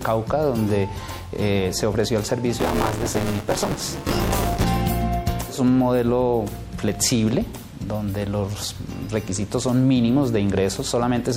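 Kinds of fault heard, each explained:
MP3 compression: Watery, swirly treble with smeared attacks throughout, likely from lossy coding near 64 kbps; unlike dropouts, there are no gaps in time, the texture just wobbles.
Buffer tearing: From 2.59 to 4.64 s a steady 200 Hz robotic buzz rides the signal as about a third of each buffer replays audio roughly 20 ms old.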